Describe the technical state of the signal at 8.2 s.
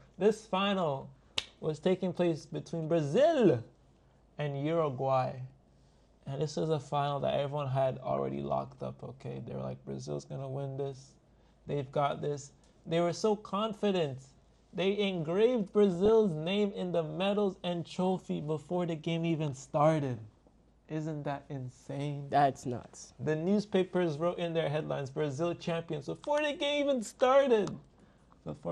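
At 8.2 s the signal is just coming out of a burst of DAB burbling, which runs from 8.11 to 8.18 s. Over those 74 ms, bit errors slipped past error correction into the audio data, which fits a handful of corrupted frames at a low error rate. Wrong samples put short blips of noise into individual sub-bands, giving a brief burbling disturbance. On a spectrogram this shows as isolated bright rectangular patches in single frequency bands, each lasting up to one frame. The waveform shows brief irregular bumps in level.

Underneath, the whole signal carries MP2 compression, plainly audible at 80 kbps. The audio is split into 32 sub-bands and shares a small bit budget, so upper bands switch off and the remaining ones are coarsely quantised. The result sounds dull and granular with a gurgling edge, likely from low-rate broadcast encoding. A spectrogram would show the high end cut away, with blocky bands flickering in and out near the top of what remains.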